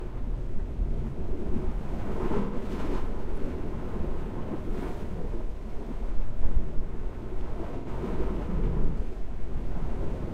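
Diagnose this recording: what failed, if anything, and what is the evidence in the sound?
AAC frame loss with concealment, at the codec stage. Smeared, noisy patches appear from 2.40 to 2.56 s and from 7.78 to 7.88 s. They last about 128 ms and 85 ms, fitting three and two lost frames. The decoder rebuilt each gap from the last good spectrum.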